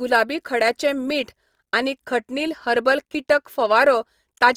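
Opus compression affects the speech throughout, from start to end. The grainy, rough texture fits a likely cause of Opus in music mode at about 24 kbps: starved bands are filled with folded or noise content instead of left empty, while the audio still reaches about 20.3 kHz.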